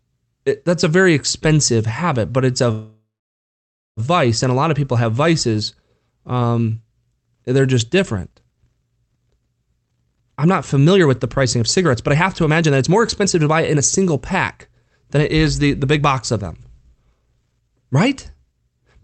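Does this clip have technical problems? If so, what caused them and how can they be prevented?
Yes. A call audio freeze runs from 2.71 to 4.0 s. The sound stretches into a fading buzz, then falls silent for about 0.9 s. Packets were likely held up and the jitter buffer ran empty. Speech resumes where it stopped, so nothing is lost. A steadier network path and a slightly deeper jitter buffer would prevent this.

A jitter buffer speed-up follows, from 9.89 to 14.26 s and again from 15.18 to 18.61 s. The buffer had built up extra delay. The receiver trimmed many tiny pitch-period slices to catch up: about 0.7 s first, at 117% speed, then about 0.3 s, at 108%. Pitch holds, but speech sounds hurried. Limiting delay spikes, so less excess audio piles up, would prevent this.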